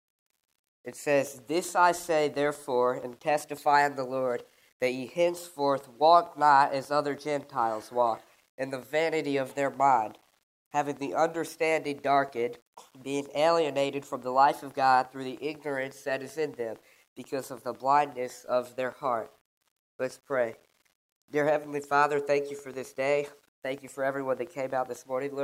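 Throughout the audio there is low bit depth without dither: a grainy distortion that rises and falls with the sound, roughest in quiet passages, where the quietest moments sputter or drop to silence. The likely cause is rounding to a coarse word length, which fits about 9 bits, without dither, so the error tracks the signal at roughly 40 dB below it. Quiet stretches of the waveform show stair-steps, and a spectrogram shows grit that appears only with the sound rather than as a steady noise floor.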